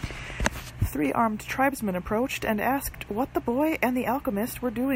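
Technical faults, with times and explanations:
No technical faults can be heard in this speech recording.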